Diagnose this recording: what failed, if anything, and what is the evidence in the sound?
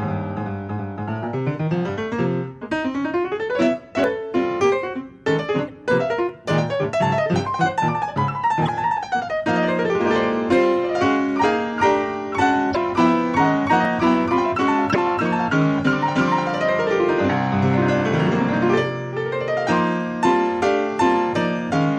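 Driver or buffer stage: small forward skips at 4.04, 6.29 and 13.85 s, the first losing some 40 ms. This is likely a dropped buffer (overrun), where samples were overwritten before collection.

Codec stage: short disruptions at 5.68–5.70, 8.64–8.69, 12.71–12.77 and 14.90–14.96 s indicate damaged data in a compressed stream. The decoder misread frames there and resynchronised.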